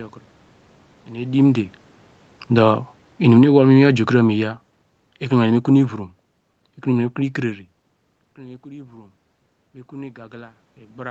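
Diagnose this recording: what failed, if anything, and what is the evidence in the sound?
Automatic gain falling, in the call processing stage. Shortly after the talker moves at the microphone around 1 s, the automatic gain control judges the input too loud and walks its gain down by about 13 dB between 2.42 and 6.08 s. The speech starts out loud and then sinks steadily across those 3.7 seconds, and the room noise sinks with it. That shared fade shows a gain stage acting on the whole signal, not the talker's own level changing.

Automatic gain rising, again in the call processing. Around 7.5 s the talker moves away and the input drops by about 21 dB. The automatic gain control responds by raising its gain from 8.35 to 9.27 s, but only by about 3 dB. Speech and background swell together slightly over that second, yet the speech stays far quieter than before. The control recovers only a small part of the lost level, so the sound remains dim after the move.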